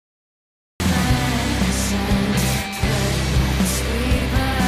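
For the first 0.8 s there is nothing but digital silence, and then at 0.8 s the sound arrives already under way. That is a cut-off start: capture began late, so the opening of the sound was never recorded. It differs from a slow fade-in because there is no gradual rise in level, and from a dropout because the gap sits at the very start rather than interrupting material that was already playing.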